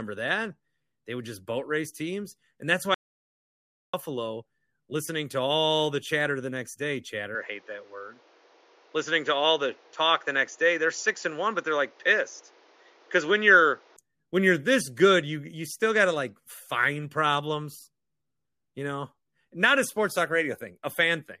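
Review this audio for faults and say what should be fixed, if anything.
An audio dropout to silence runs from 2.94 s to 3.93 s. The speech stops dead and the gap is silent, with no room tone at all. About one second of speech is lost. The likely cause is a brief loss of the input, such as a loose connection or a momentary mute, while the recorder kept writing silence. Secure cables and disable any auto-mute on the input before recording.

From 7.35 s the input switches to a poorer device. The change is instant, with no gap. Nothing reaches above 7.1 kHz, so the speech turns duller and boxier. A new background noise appears, roughly 35 dB under the speech. The level stays about the same. The fuller sound returns at 13.97 s. This is likely a different microphone or headset profile taking over. Lock the recording input to one device so the system cannot switch on its own.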